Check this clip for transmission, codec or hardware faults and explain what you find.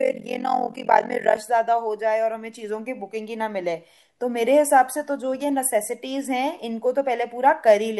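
One fault is present, confined to the opening of the speech. Overlap-add ripple, from 0.0 to 1.38 s: frames were windowed and rejoined with an overlap whose gains don't sum evenly, so the level dips by about 60 dB around 40 times a second, a harsh, rough flutter.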